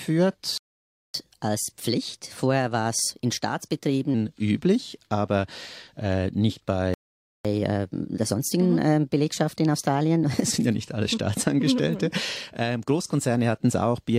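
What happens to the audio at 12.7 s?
Nothing goes wrong at 12.7 s; the audio there plays through intact, with no dropout, click, distortion or other fault at that moment.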